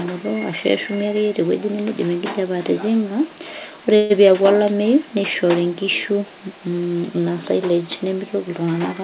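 At 3.96 s the speech hits a call audio freeze that lasts until about 4.13 s. The receiver seems to have run dry, likely because packets stalled in transit and the jitter buffer emptied. So for roughly 138 ms you hear the last bit of sound smeared out as a fading buzz rather than new speech. Then it picks up right where it left off, nothing lost, just shoved about 138 ms later, all heard through narrowband phone audio that stops at 4 kHz.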